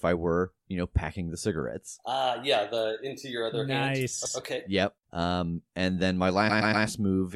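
At 4.25 s, after "into your other nice", and at 6.49 s, repeated frames replay a 120 ms compressed block once, then three times: an identical stutter, not a decaying echo.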